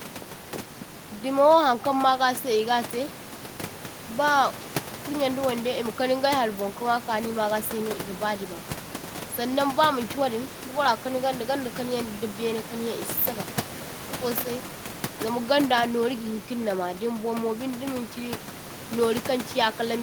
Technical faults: none

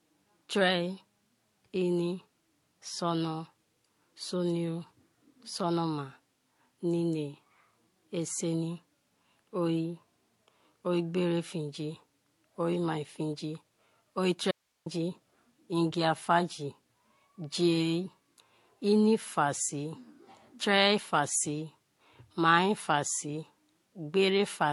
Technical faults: transcoding between lossy codecs; audio dropout to a faint residue

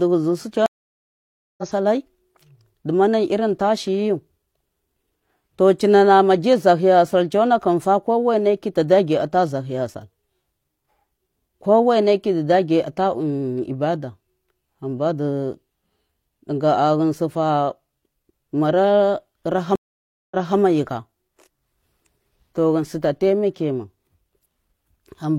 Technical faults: stream reconnect

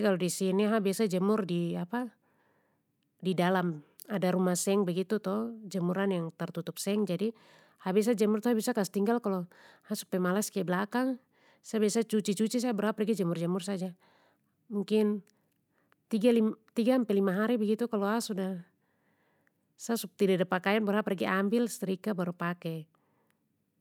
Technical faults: none

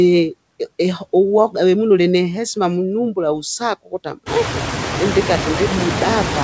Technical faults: noise suppressor artifacts; speech cut by the noise suppressor

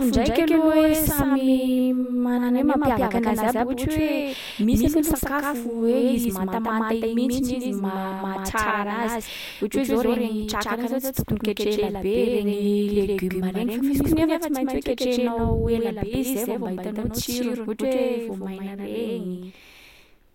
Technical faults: doubled audio track

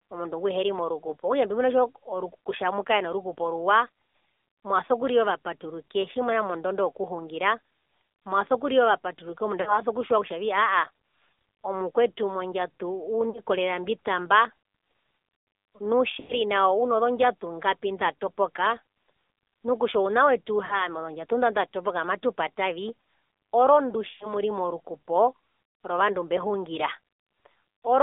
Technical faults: AMR narrowband mobile codec; lost AMR speech frames

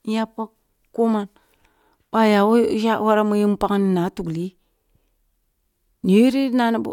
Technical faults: none

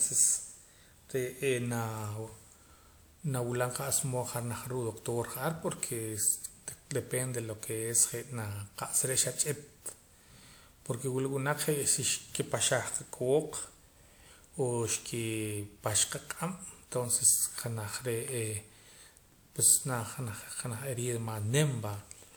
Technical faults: generation loss

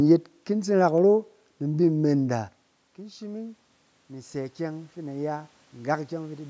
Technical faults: automatic gain rising

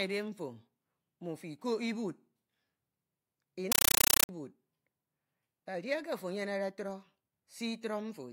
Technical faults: compressed stream played as audio

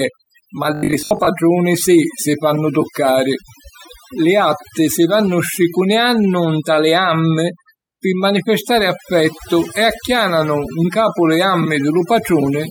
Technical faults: overdone noise removal; robotic sound from repeated short buffers

